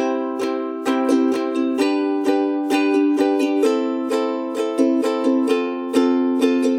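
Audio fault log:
The signal has no audible technical faults anywhere in the audio.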